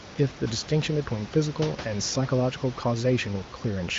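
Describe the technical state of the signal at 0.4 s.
At 0.4 s the signal is intact, with room noise about 14 dB below the speech and the HD Voice (AMR-WB) coding causing no or only faint harm there.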